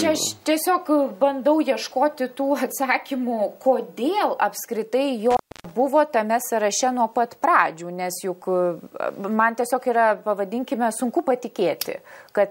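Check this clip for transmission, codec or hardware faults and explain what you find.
One hardware fault is audible. Intermittent contact, 5.31 to 5.71 s: a loose cable or plug opens for about 287 ms, so the sound drops out or breaks up, with crackle at each edge.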